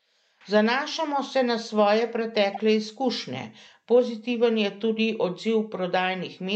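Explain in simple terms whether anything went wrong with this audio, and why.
Something did go wrong, briefly, at 2.53 to 2.59 s, right after "se na svoje" and just before "izkušnje pozitiven". That short chirp or blip is a corrupt frame decoded: some of the compressed data was damaged, roughly two frames' worth, and the player decoded it anyway, so sound energy landed at the wrong pitches. Unlike a dropout, which leaves a gap or a muffled patch, this adds a strange sound that doesn't belong.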